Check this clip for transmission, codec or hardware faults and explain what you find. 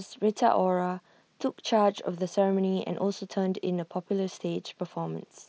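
Two brief transmission faults: concealed Bluetooth headset packet loss at 0.83 s and 2.30 s. Each gap of about 7.5 ms, consistent with a single lost packet, was filled by repeating the best-matching recent waveform. Unlike a dropout, there is no silence or click. Each loss is nearly hidden. Being isolated losses, they never build into the sustained buzzy tone of longer runs. The wideband mSBC headset sound, band-limited at 8 kHz, runs through both.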